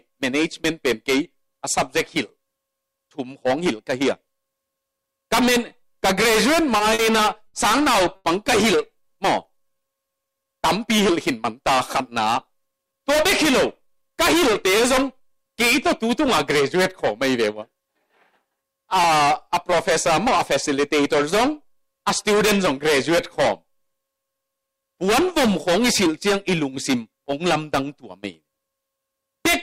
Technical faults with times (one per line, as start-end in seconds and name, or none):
6.77-7.01 short stall from a late packet
7.47-7.56 short stall from a late packet
8.16-8.27 short stall from a late packet
8.95-10.78 jitter buffer slow-down
12.71-13.16 jitter buffer speed-up
13.80-15.45 jitter buffer speed-up